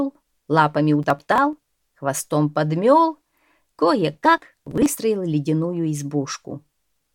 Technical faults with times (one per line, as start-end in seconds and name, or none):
1.03-1.68 processor overload crackle
4.14-4.97 processor overload crackle